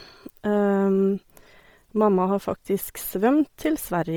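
Speech, with a grainy, breathy edge and a dull, noise-filled top end all the way through, likely Bluetooth LC3 compression squeezed hard, which fits around 32 kbps with 10 ms frames.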